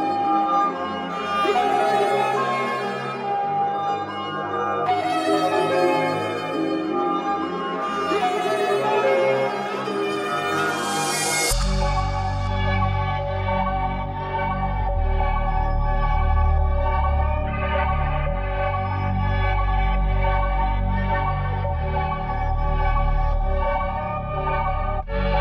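No technical faults can be heard anywhere in this audio.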